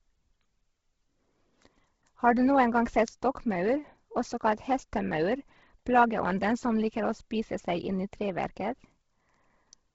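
A low-bitrate Bluetooth LC3 compression stage is the likely cause of the damage running through this whole speech recording. The coder has starved the upper spectrum, patching gaps with synthetic noise, so the speech carries a breathy, grainy fizz and nothing survives above 7.7 kHz. The heavy degradation fits a bitrate near 16 kbps, and the coding uses 10 ms transform frames.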